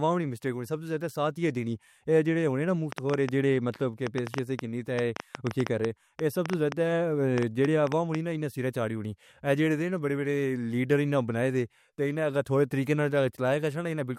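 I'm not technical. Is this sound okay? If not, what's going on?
No. From 2.92 to 8.16 s, just after "ہوئے نا" and until "دی سیرے چارہی", a train of clicks ticks over the speech, roughly thirty sharp pops at an uneven pace of nearly six per second. Likely cause: electrical interference or a faulty connection or power supply.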